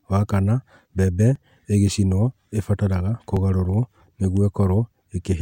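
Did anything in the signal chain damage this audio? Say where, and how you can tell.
Yes, the damage most likely happened at the driver or buffer stage, where a dropped buffer (overrun) occurred twice. The recording software didn't collect its samples in time, the hardware overwrote them, and the audio on either side of the gap was joined directly. At 1.36 s, just after "kana mbembe", and again at 3.37 s, there's a slight jump in the speech and no silence, which fits only a few milliseconds going missing each time.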